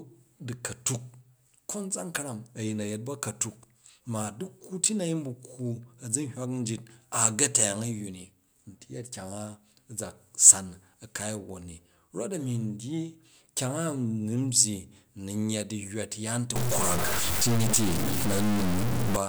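From 16.56 s to 19.16 s the speech turns harsh and buzzy, and the gaps between phrases fill with a gritty noise floor instead of falling silent. This is the signature of a stuck bit, likely from a faulty data line or converter holding one bit fixed. Roughly half the samples are pushed off by a step near -25 dBFS, a fairly high bit, and the error flips with the waveform's sign around zero, which keeps the pauses noisy.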